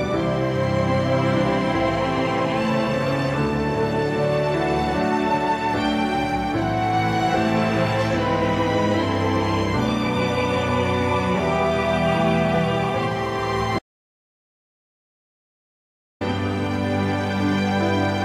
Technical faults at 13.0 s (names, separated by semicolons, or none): none